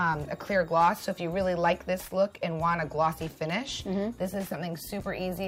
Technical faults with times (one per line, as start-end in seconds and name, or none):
none